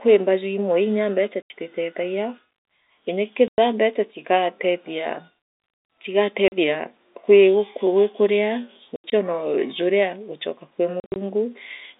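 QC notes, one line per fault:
1.42–1.50, 3.48–3.58, 6.48–6.52, 8.96–9.12, 11.00–11.16 s: packet loss filled with silence. Speech drops out for 40 to 120 ms with hard edges. Gap lengths fit 20 ms packets. The last two gaps are scattered holes across 160 ms.
8.29 and 10.47 s: DC step. The waveform's zero line jumps, giving a low thump, then the offset drains away as a 20 Hz high-pass pulls it back.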